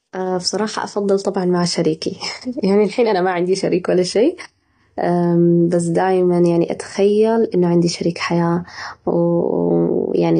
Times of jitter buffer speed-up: none

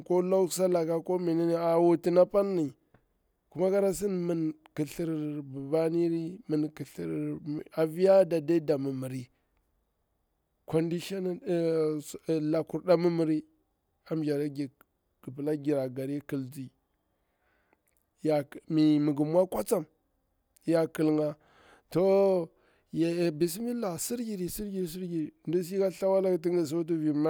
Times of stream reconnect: none

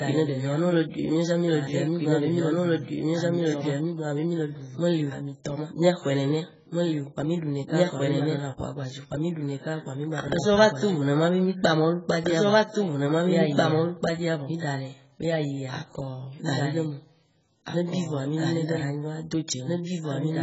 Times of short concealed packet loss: none

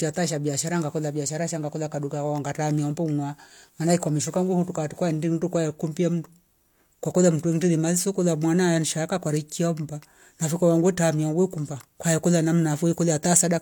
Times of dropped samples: 7.87, 12.31

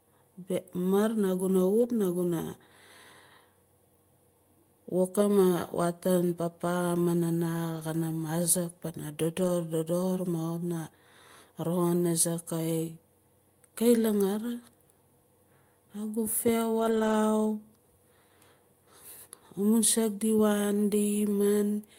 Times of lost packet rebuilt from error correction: 1.79-1.85, 7.75-7.81, 9.39-9.49, 16.79-17.13

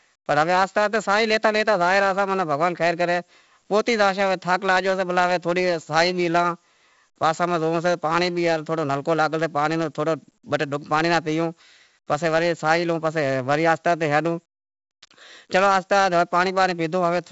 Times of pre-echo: none

